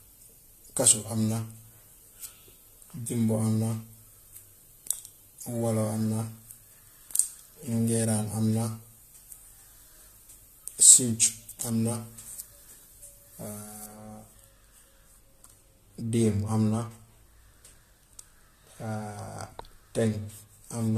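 Pre-emphasis left on runs from 0.0 to 13.9 s. The speech carries a treble lift of about 11 dB at 10 kHz relative to 1 kHz, a shape that fits a 50-microsecond FM emphasis curve whose matching de-emphasis was never applied. Sibilants hiss and the voice sounds thin and brittle. At 13.9 s the boost stops, and the tonal balance drops back abruptly toward a fuller, darker sound.

Generation loss is present throughout the clip. It is likely the result of repeated lossy encoding, about three times over, consistent with AAC-LC at around 64 kbit/s. Each new pass quantised the audio again on a shifted frame grid, so the noise and spectral gaps built up. Nothing survives above 14 kHz. The speech sounds swirly and hollow, and consonant attacks are smeared.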